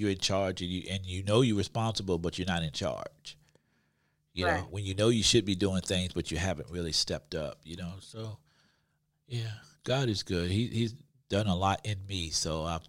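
No technical faults can be heard anywhere in this speech recording. Nothing interrupts or alters the sound at any point, so there is no event to place in time.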